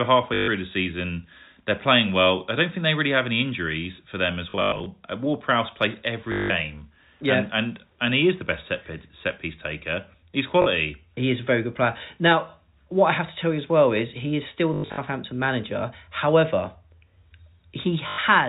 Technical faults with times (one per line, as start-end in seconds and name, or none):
0.34-0.48 packet loss with last packet repeated
4.50-4.86 packet loss with last packet repeated
6.32-6.50 packet loss with last packet repeated
10.62-10.66 packet loss with last packet repeated
14.74-14.98 packet loss with last packet repeated
18.08-18.18 packet loss with last packet repeated